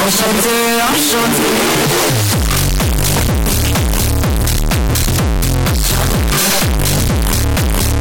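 From start to end, the 32-bit float samples were likely read as 32-bit integers, a float read as integer fault, so sign and exponent bits dictate amplitude. The waveform turns almost square at an almost fixed, high level: very loud, harsh, background noise as loud as everything else, though pitch remains traceable.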